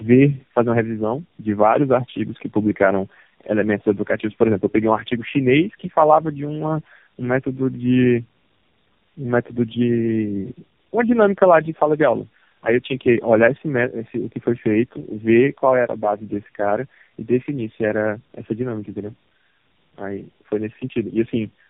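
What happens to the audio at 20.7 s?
At 20.7 s the speech carries tandem speech coding, present throughout the clip rather than starting there. The sound fits three low-rate speech codecs in a row, such as G.729A and then AMR-NB twice, joined by plain G.711 links. At each border the call is decoded and coded again. Every coder rebuilds the last one's errors. Nothing remains above 3.7 kHz, so the speech sounds muffled. It is also rough and warbly.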